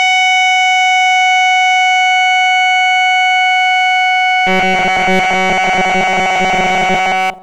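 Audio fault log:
4.47–7.43 s, robotic sound from repeated short buffers: the music turns into a rigid, metallic 188 Hz buzz, likely from a roughly 5 ms buffer replayed in place of most incoming audio. The spectrogram shows flat, evenly spaced harmonic stripes.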